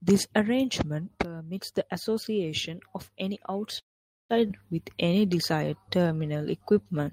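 Right after "the association of any", at 3.79 s, the speech stalls in a call audio freeze that runs to 4.31 s. The last sound carries on only for an instant before dropping out, leaving about half a second of near silence. Then it resumes exactly where it stopped, so nothing is lost; it's just shoved later. The likely cause is packets held up in transit until the jitter buffer emptied, which added roughly 500 ms of delay.

Shortly after, at 4.47 to 4.51 s and still just past "the association of any", there's a skip ahead. Playback lurches forward with almost no gap, and something like 0.4 s of speech is simply gone, the two sides butted together. That's a chunk of audio dropped while later audio was already waiting, which claws back most of the delay the freeze built up.

From 4.84 s to 7.05 s you get a jitter buffer slow-down. The speech plays at about 91% speed while the pitch stays put, so sounds come across a bit stretched and drawn out. 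The receiver is repeating single pitch periods and slivers of pauses over and over to rebuild its reserve, and over that stretch it pads in 197 ms of extra audio.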